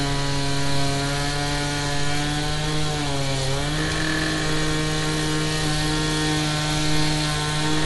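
The recording holds sounds, and plainly audible codec damage runs through the whole clip. Nothing survives above 11.5 kHz, so the top end is cut away and everything sounds dull. The likely cause is Dolby Digital compression at a low bitrate, around 64 kbps. At that rate the encoder narrows the band. It also leaves many frequency lines without mantissa bits, and the decoder fills those gaps with noise.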